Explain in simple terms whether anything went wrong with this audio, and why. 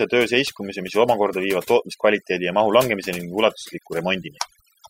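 Overdone noise removal runs through the whole clip, from the start to the end at about 5 seconds. A noise cleaner was set too strong, so it shut off any pitch range that sounded like background noise. The pauses drop to near silence with twinkling specks, and softer parts of the voice were cut too.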